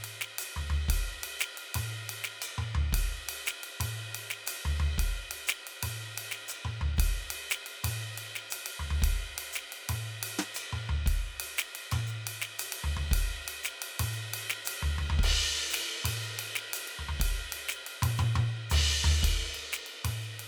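No technical faults are audible anywhere in the music.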